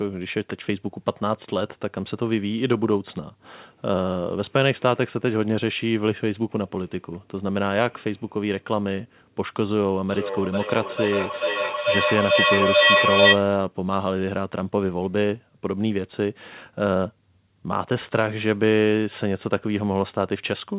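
A speech recording carried over a call, band-limited to nothing above 4 kHz in a way that fits a G.711 A-law codec, has a feedback echo between two devices from 10.09 to 13.48 s: a second device in the same room replays the far end, its microphone recaptures that, and neither echo canceller removes the other device's output. Each word returns roughly every 0.4 s, thinner and more ringing, and the repeats build up to about 6 dB above the speech instead of fading.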